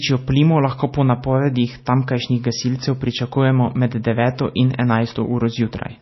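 Throughout, the speech sounds watery and swirly, with nothing above 5.8 kHz. This is likely MP3 compression at a low bitrate, around 24 kbps.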